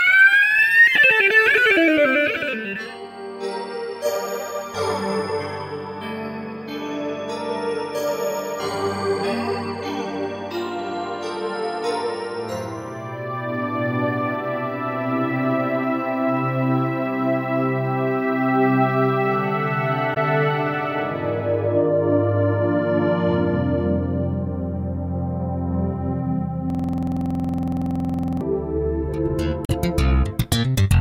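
At 20.13–20.17 s and again at 29.64–29.71 s the audio shows damaged data in a compressed stream: the decoder misreads corrupt frames and resyncs, giving a brief disturbance, seen as a short broadband smear on the spectrogram. From 26.70 to 28.41 s a system hang loop repeats one 46.44 ms slice about 37 times, which fits a 2048-sample buffer. It is heard as a repetition at 21.5 Hz and looks like identical repeating blocks in the waveform, with evenly spaced vertical stripes on the spectrogram.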